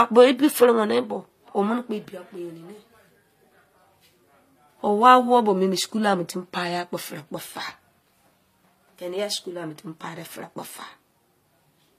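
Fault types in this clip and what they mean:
Transcoding between lossy codecs: Nothing in this speech sits above about 14.9 kHz, and the artefacts from two different coders seem layered on top of each other throughout. The likely cause is a low-rate HE-AAC encode, around 24 kbit/s, later re-encoded to MP3 at about 61 kbit/s. The MP3 stage spends its bits reproducing the earlier damage while adding its own artefacts, so both sets of artefacts come through together.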